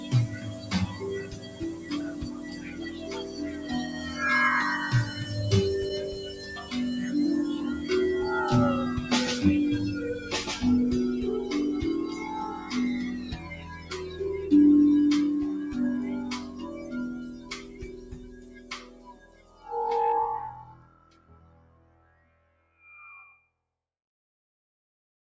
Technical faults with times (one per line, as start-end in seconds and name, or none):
0.00-25.36 noise suppressor applied to music or sounds
0.29-4.19 sound cut by the noise suppressor
17.31-19.63 sound cut by the noise suppressor
20.86-22.79 sound cut by the noise suppressor